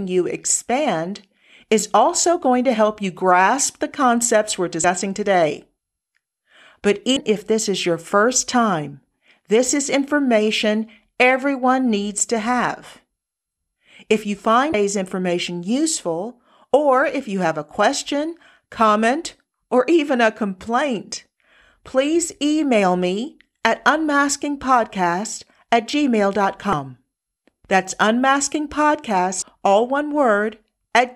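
At 4.81–4.84, 7.13–7.17, 14.71–14.74, 26.70–26.73 and 29.39–29.42 s, damaged data in a compressed stream makes the decoder misread frames, giving roughly 30 ms glitches that show as thin vertical smears on a spectrogram.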